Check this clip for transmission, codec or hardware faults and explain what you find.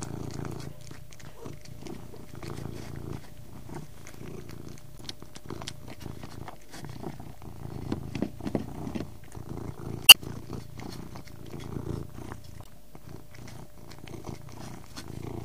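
There is one fault type, damaged data in a compressed stream, at 4.95–5.01 s, 10.06–10.16 s and 12.62–12.68 s. Corrupted bytes made the decoder misread frames and lose sync. Each gives a brief chirp or blip.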